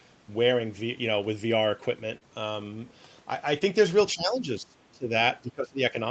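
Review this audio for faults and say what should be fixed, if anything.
Short concealed packet loss occurs twice, at 2.17–2.23 s and 3.59–3.62 s, covering gaps of about 40 ms and 20 ms. Rather than going silent, the receiver extends the preceding sound across each hole and then blends back into the real signal, so you hear a brief smeared or wobbling patch, not a clean dropout or click. That synthetic continuation is what separates it from a plain gap. To prevent it, stabilise the network path or give the jitter buffer more headroom so packets arrive before playout.

Speech suppressed in double talk appears at 4.14–5.12 s and again at 5.38–5.95 s, with roughly 0.7 s and 0.5 s of each stretch pulled down, at worst by about 20 dB. The likely cause is the echo canceller mistaking overlapping far-end talk for echo and attenuating the near talker along with it. Unlike packet loss, the sound is real but ducked, dulled or chopped over hundreds of milliseconds rather than smeared briefly. 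Better echo-canceller double-talk detection, or a headset that removes loudspeaker echo, would prevent it. The top end stopping near 8 kHz is the normal bandwidth of this Opus call path, not a fault.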